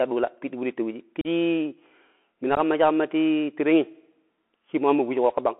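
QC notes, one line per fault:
throughout: Bluetooth CVSD headset codec. The speech sounds thin and telephone-like, with a granular hiss under it and scratchy, distorted s sounds. Only about 250 Hz to 3.4 kHz comes through, and the coarseness fits a 64 kbps CVSD link. That codec sends one bit per sample, saying only whether the waveform steps up or down. Its adaptive step can't keep up with loud high-frequency energy, so sibilants smear into grit and the quantising leaves a steady rough hiss.
1.21 to 1.27 s and 2.55 to 2.58 s: unconcealed Bluetooth headset packet loss. The speech briefly drops out with hard-edged gaps, about 38 ms long at 1.21 s and 15 ms at 2.55 s, and each one ends with an abrupt restart that is quieter for a moment. The first gap fits about five lost voice packets, the second a couple. Nothing filled in the missing audio, so the gaps cut in sharply, and the CVSD decoder needs a moment to rebuild its step size before the level comes back up.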